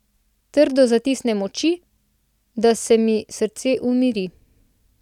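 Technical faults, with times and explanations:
No technical faults detected.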